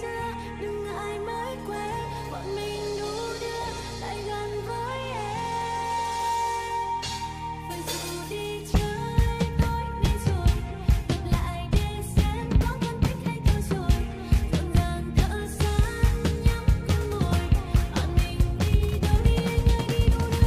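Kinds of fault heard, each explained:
No technical fault can be heard anywhere in the audio. Nothing stands out against the sound itself at any point.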